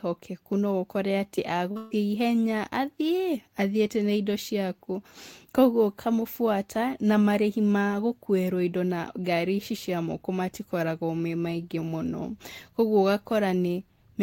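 At 1.71 s there is a short concealed packet loss lasting until 1.77 s. About 40 ms of the call failed to reach the decoder in time. The receiver filled the hole by extending the sound that came just before it. It copied the pitch where the sound was voiced and used shaped noise where it was not. The result is a brief smear in the speech, heard as a wobble.

A burst of packet loss follows at once, from 1.77 s to 1.93 s. Here about 140 ms went missing in a row. The receiver kept continuing the last sound and turned it down as the gap went on. There is no silence in the gap. It becomes a held buzz or a fading hiss. The speech then picks up further along, and the part in between is gone.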